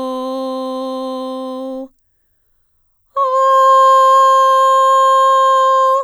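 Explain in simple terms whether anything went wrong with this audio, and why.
Nothing went wrong here; the music comes through just as it should, with no glitches to point to.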